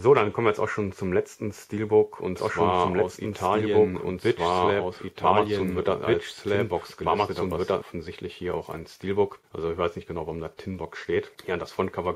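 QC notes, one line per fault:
2.36–7.82 s, doubled audio track: a second copy of the same audio is mixed in, most likely captured again through a slower path or left behind by an edit that holds two copies out of step. The copy trails the original by about two seconds at roughly equal level and covers the full band, so the sound seems to repeat over itself with no decay or room colour. It cuts in abruptly at 2.36 s and drops out just as sharply at 7.82 s.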